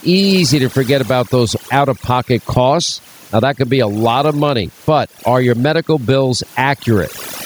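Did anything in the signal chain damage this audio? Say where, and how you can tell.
Yes. The damage sits in the call-processing stage, where overdone noise removal runs through the whole clip. The room noise, about 40 dB below the speech, is pushed down, leaving twinkling specks in the gaps. The reducer was set too aggressively, so it drops any frequency band that falls near its noise estimate. Those bands turn on and off independently, and the quieter parts of the speech are removed along with the noise.

Gain pumping is also present from start to finish, with a level swing of around 15 dB. Loud and soft passages end up squashed toward the same level. The likely cause is input gain set far too high for the microphone, with a fast limiter or compressor clamping it down on every loud sound and releasing it in the gaps.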